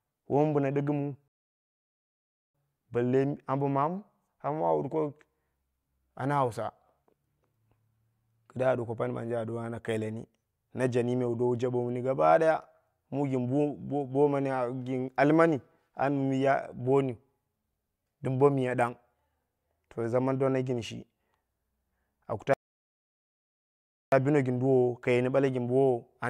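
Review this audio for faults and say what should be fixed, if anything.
Two rebuffering stalls: at 1.28 s, after "min biya diggimwu", silence runs about 1.3 s before "balle ambo"; at 22.54 s, silence runs about 1.6 s before "bino gin". The player starved and waited. Unlike a dropout, speech resumes exactly where it stopped, with nothing missing. Larger pre-buffering and adaptive bitrate would prevent this.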